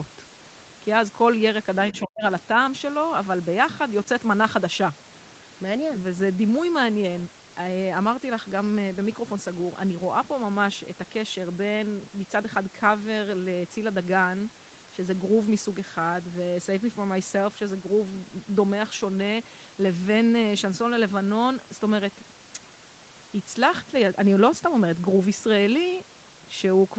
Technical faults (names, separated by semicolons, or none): speech suppressed in double talk